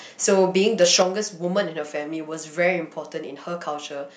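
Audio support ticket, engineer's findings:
Microphone overload, 0.32–0.40 s and 0.66–1.02 s: harsh crackle on peaks, about 2 dB then about 3 dB over full scale, around 1% then 0.7% of samples flattened. Likely input gain too high, so the converter cuts the peak tops.

Microphone volume stepped down, 1.02 s: sound and background drop together by about 6 dB in one step, immediately after the second overload. The software likely lowered the device input gain in response to the clipping.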